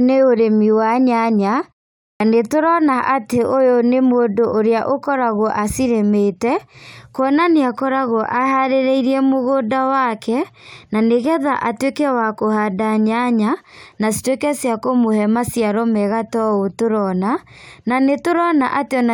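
A speech recording in which the sound at 2.11 s jumps abruptly out of silence with its opening missing, roughly 93 ms lopped off up to 2.20 s. This is a clipped start after a pause: following the 0.47 s gap, the output device slept and needed time to wake, swallowing that onset.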